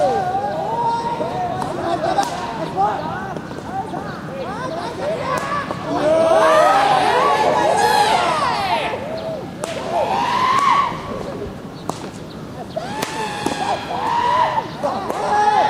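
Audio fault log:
Nothing stood out on listening to this recording.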